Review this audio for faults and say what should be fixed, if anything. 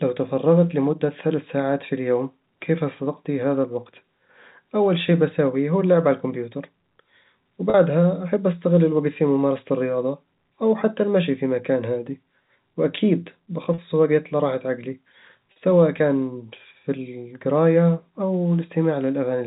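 Packet loss with pitch repetition occurs three times, each gap about 40 ms long, which fits two 20 ms packets. The gaps fall at 7.70 s, just before "أحب أستغل الوقت في"; at 13.74 s, between "في مكان هادي وأكيد" and "وقت لراحة عقلي"; and at 15.52 s, between "وقت لراحة عقلي" and "كان في القراية". In each, the receiver loops the last pitch period, so the sound briefly turns held and buzzy. On a waveform, identical repeating cycles decay in amplitude before normal speech resumes. On a spectrogram, flat, evenly spaced harmonic stripes replace the moving formants. This all sits within the 4 kHz G.711 telephone band. A larger jitter buffer with forward error correction or redundant packets would prevent these losses.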